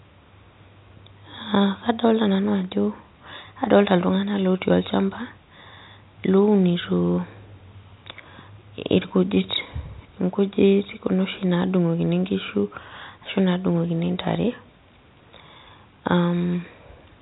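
Speech over telephone coding, with no technical faults heard.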